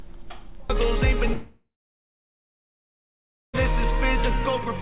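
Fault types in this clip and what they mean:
Short concealed packet loss: At 1.28 to 1.31 s, roughly 20 ms of audio failed to arrive in time, and the decoder bridged the gap by stretching the preceding sound before blending back in. The result is a quick smear or wobble of about 30 ms, with no break in continuity. What separates it from a dropout is its brevity: the sound never thins into silence.
Long network dropout: From 1.33 s to about 3.55 s, roughly 2.2 s of audio is gone, most likely because nothing reached the receiver during that stretch. The last sound is extended briefly as a decaying buzz or hiss, then about 1.8 s of silence follows before the audio resumes with the missing portion simply skipped. The fading tail, the long gap and the jump in content mark it as a dropout rather than brief concealment, all heard through the telephone-band codec, with nothing above 4 kHz.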